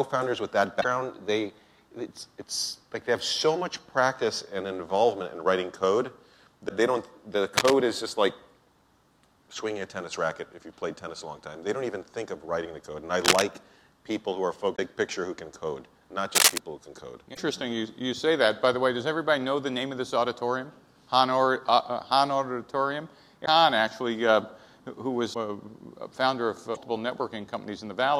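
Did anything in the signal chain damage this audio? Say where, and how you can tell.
Yes. At the codec or storage stage, short glitches of 30 to 60 ms occur at 0.80, 6.68, 14.75, 17.33, 23.45, 25.33 and 26.74 s, each with a small skip forward in the audio. This is likely a broken MP3 bit reservoir: after frames went missing, the next frame pulled leftover bytes from the wrong frame. The lengths fit roughly 26 ms MP3 frames.

In the analogue wiring, bursts of dense, ragged scratching run from 7.56 to 7.73 s, 13.20 to 13.42 s and 16.35 to 16.58 s, about as loud as the programme or somewhat louder. This is likely cable scratch noise, from a worn cable or connector whose contact resistance jumps as it moves.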